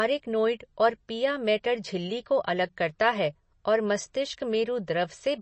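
MP3 compression runs from start to finish, likely the cause of the speech sounding watery and swirly, with nothing above 8.3 kHz. The encoder, starved at what sounds like about 32 kbps, dropped the treble and let weak frequency lines flicker between frames, smearing attacks.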